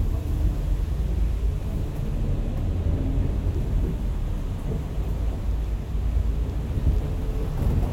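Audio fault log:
0.46 s and 5.40–5.42 s, compressed frames skipped: at each point the sound jumps ahead by about 20 ms, consistent with one lost compressed frame.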